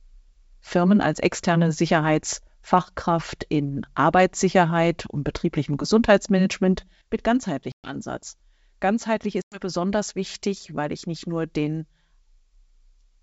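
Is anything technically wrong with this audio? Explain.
Yes. At 7.72 to 7.96 s and again at 9.42 to 9.62 s, just before "besonders wichtig weil ich", the speech drops into abrupt, hard-edged silence of about 120 ms and 100 ms, then returns with brief, slight distortion. This is packet loss on an ADPCM call. Several packets went missing, and while the gap was filled with silence, the decoder's adaptive predictor and step size drifted away from the sender's. It needed tens of milliseconds to resynchronise.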